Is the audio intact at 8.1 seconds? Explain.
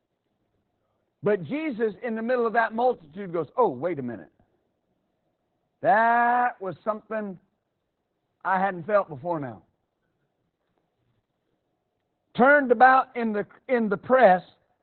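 No. At 8.1 s, as across the whole clip, Opus voice compression is audible. Its low-rate SILK coding points to roughly 8 kbps, with the band cut to narrowband, nothing above 4.2 kHz, and a coarsely coded excitation, leaving the speech muffled, hoarse and faintly robotic.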